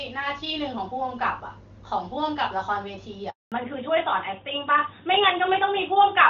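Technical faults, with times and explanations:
3.30–3.52 s, handover gap: The speech fades out within a few tens of milliseconds and leaves a silence of about 220 ms before the sound resumes. This is what a call handover between networks produces: while the phone re-attaches to the new link, no speech frames reach the decoder, so it has nothing to play and simply ramps down. Whatever was spoken inside that window is gone, not delayed, and the audio picks up mid-stream on the new connection.
3.52 s to the end, fallback to narrowband: Straight after the gap the bandwidth collapses, with nothing left above 4 kHz for the rest of the clip. Before the handover the sound carries the wider HD Voice band with only faint codec artefacts, which fits AMR-WB at a high rate, around 23.85 kbit/s. After it, the duller, rougher quality fits narrowband AMR at about 12.2 kbit/s. The new link negotiated the older codec, which codes only the traditional telephone band, so sibilance and upper detail disappear together.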